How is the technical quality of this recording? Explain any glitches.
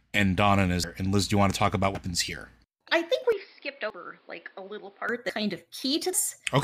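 The speech recording has repeated skips and a stretch of degraded tone.

Dropped buffers (overruns) jump forward at 0.84, 1.95 (after "want to talk about"), 2.88 (just before "I think"), 3.90, 5.29 and 6.13 s. Each skip removes roughly 0.1 to 0.3 s of sound, likely because samples were overwritten before the software collected them.

From 3.32 to 5.09 s, just after "I think", the input likely switched to a poorer device. The sound turns dull, drops about 5 dB, and gains a noise floor about 30 dB down. There is no gap at the switch.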